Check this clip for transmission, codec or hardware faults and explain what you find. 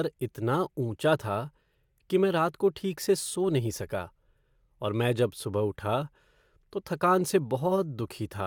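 No faults can be heard.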